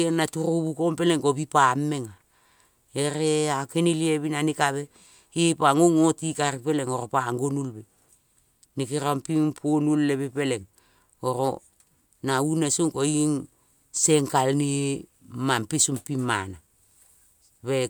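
Speech recording, no technical faults detected anywhere in the clip.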